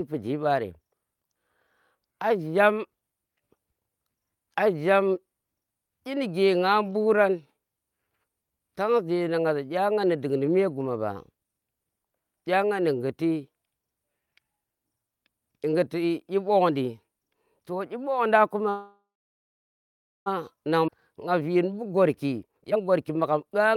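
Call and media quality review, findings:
Call audio freeze, 18.69 to 20.28 s. Last sound continues as a fading buzz, then about 1.2 s of silence, then the speech resumes where it stopped. Nothing lost, 1.57 s of delay added. Likely cause: delayed packets draining the jitter buffer.

Skip ahead, 20.87 to 20.90 s. Playback jumps forward with only a 9 ms join. Roughly one second of speech is gone. Receiver or network dropped queued audio, cutting back the delay built up by the freeze.

Jitter buffer speed-up, 21.34 s to the end. Speech runs at 121% speed, pitch unchanged, sounding hurried. Receiver removes short pitch-period pieces repeatedly, about half a second in total, to shrink an overfull buffer back toward its target.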